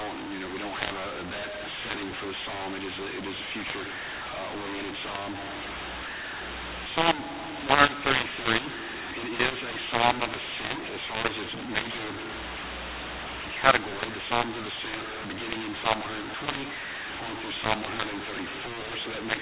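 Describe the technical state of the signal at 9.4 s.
At 9.4 s the speech sounds harsh and gritty, with levels scrambled so some parts jump too loud and others sink, and the quiet gaps are filled with hiss rather than silence. This runs through the whole clip, not just this moment. It is a mu-law and A-law mix-up: audio coded with the mu-law companding curve is being expanded with the A-law curve, so every 8-bit code maps to the wrong level. The telephone band underneath, with nothing above 4 kHz, fits G.711 coding.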